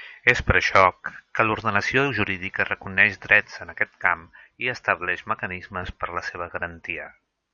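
Speech clip with lost LE Audio frames at 7.05–7.07 s. About 15 ms of Bluetooth LE Audio data, consistent with two 7.5 ms frames, never arrived, so the LC3 decoder filled the gap by repeating the last spectrum with randomised signs, turning the sound there into a brief noisy smear.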